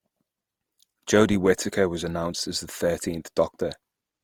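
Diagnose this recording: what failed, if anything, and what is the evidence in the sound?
Generation loss in the codec stage, likely about three lossy Opus passes fitting 48 kbit/s: the speech sounds swirly, hollow and smeared throughout, with blurred attacks.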